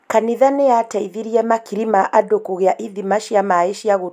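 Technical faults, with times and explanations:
No technical faults can be heard in this speech clip. There is nothing here that calls for a time or an explanation.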